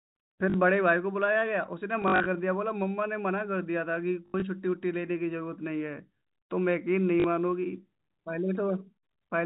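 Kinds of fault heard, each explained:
Packet loss with last packet repeated: the receiver replayed the previous packet in place of missing ones, causing four brief, robotic stutters, with runs up to 80 ms.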